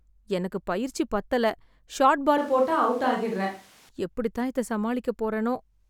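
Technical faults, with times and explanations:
2.38–3.89 s, switch to a distant microphone: the speech abruptly turns roomy, hollow and thin at unchanged level, with room noise about 30 dB below it, likely a fallback from the close microphone.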